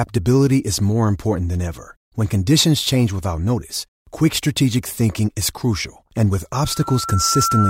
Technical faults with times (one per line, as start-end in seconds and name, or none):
6.57-7.70 loudspeaker feedback squeal